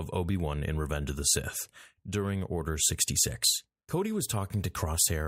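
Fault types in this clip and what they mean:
No audible technical faults anywhere in this speech recording.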